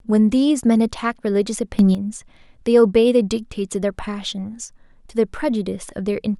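From 1.79 to 1.95 s the speech and background noise leap up together by about 9 dB, a sudden gain jump likely from gain applied without a ramp.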